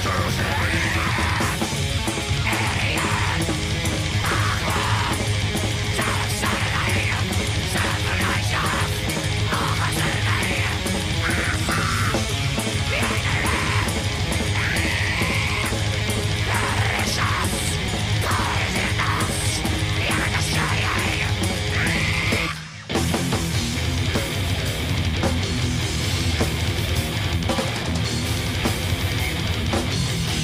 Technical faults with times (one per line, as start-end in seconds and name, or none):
4.24 dropped buffer (overrun)
17.88 dropped buffer (overrun)